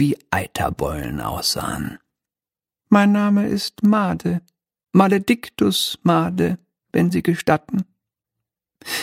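No technical faults are audible.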